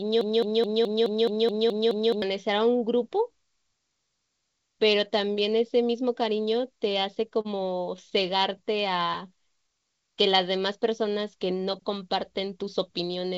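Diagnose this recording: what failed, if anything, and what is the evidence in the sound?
Broken-record loop, from the very start to 2.22 s, already under way when the recording begins: a 212 ms fragment of speech repeats exactly, nine times back to back. The playback or streaming stage likely stalled and kept resending its last buffer, and the speech due in that time is lost.

Repeated stalls (stutter), 6.92 to 7.47 s and 7.97 to 8.41 s: each span has four brief hitches, the longest 38 ms in the first and 14 ms in the second. Packets arrived late on the network, so the jitter buffer ran dry and the receiver stretched the last sound each time. Nothing is lost, but delivery drags.

Jitter buffer slow-down, 8.63 to 10.13 s: speech plays at about 93% speed with unchanged pitch, and sounds are drawn out. The call receiver repeated single pitch periods to add about 114 ms and rebuild its reserve.

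Jitter buffer speed-up, 12.4 to 13.35 s: speech runs at about 106% speed, hurried but at the same pitch. With excess audio queued in the G.722 call path, which carries nothing above 8 kHz, the receiver cut short pitch-period pieces totalling about 50 ms to reduce delay.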